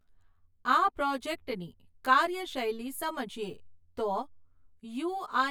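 Speech, with channel delay (comb filtering) running the whole way through: one side arrives roughly 10 ms late, and summing to mono cancels a comb of evenly spaced frequencies starting somewhere around 40 Hz. That's why the voice sounds hollow and phasey.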